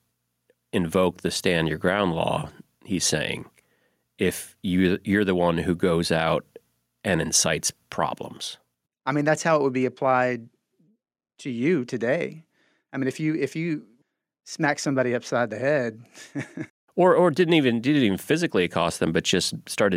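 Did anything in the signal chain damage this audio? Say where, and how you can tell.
No, nothing stood out on listening to this speech recording that would point to damage at any stage of the signal chain.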